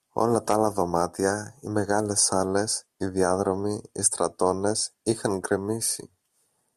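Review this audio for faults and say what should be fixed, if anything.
Nothing here needs fixing, so you can leave this one as it is.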